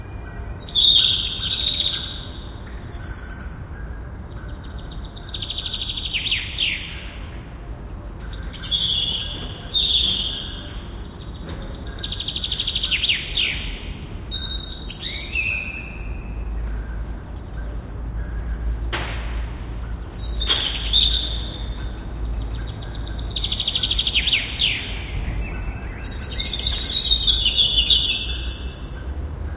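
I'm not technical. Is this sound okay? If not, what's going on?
Yes, this sound is okay; it simply came through an ordinary phone-style call connection, which is why it has nothing above 4 kHz.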